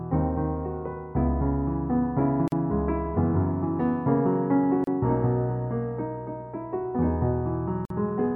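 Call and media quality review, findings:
Gap at a join of encoded pieces. Short silences at 2.48–2.52 s (43 ms), 4.84–4.87 s (32 ms), 7.85–7.90 s (50 ms). Edges smeared by the codec. Sound resumes where it stopped. Separately encoded segments concatenated untrimmed. Encoder delay and last-frame padding left in.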